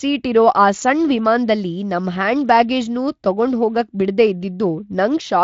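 No faults: the speech runs through a Speex encode whose band stops near 7.5 kHz, and nothing breaks, drops or glitches anywhere in it.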